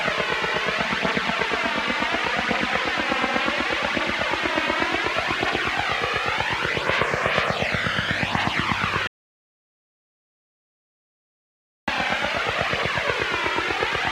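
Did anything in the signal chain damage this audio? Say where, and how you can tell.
Yes. Between 9.07 and 11.88 s the audio drops out to silence for about 2.8 s. The sound stops abruptly mid-flow and resumes just as abruptly, with no room tone in the gap. On a waveform this shows as a flat line; on a spectrogram, as an empty vertical band with no noise floor. The likely cause is a lost input at the capture stage, such as a disconnected device, a failed link or a stray mute, while recording continued writing silence. Whatever sounded during that stretch is gone.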